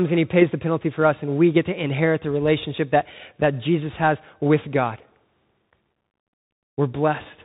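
Speech runs through the Bluetooth CVSD headset codec for the whole clip, and the damage is plainly audible. Nothing above 4 kHz survives. Each sample is only a one-bit up-or-down step, which fits 64 kbps. Loud high sounds outrun the step and distort. S sounds turn scratchy over a granular hiss.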